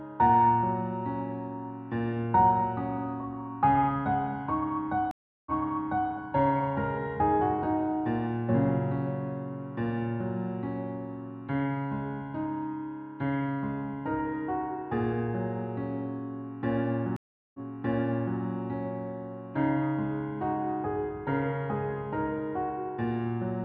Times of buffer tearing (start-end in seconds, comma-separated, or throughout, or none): none